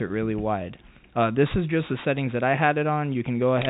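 The audio comes through a telephone-style call path with no faults. Nothing is heard above about 4 kHz, and the narrowband character fits a G.711 A-law connection.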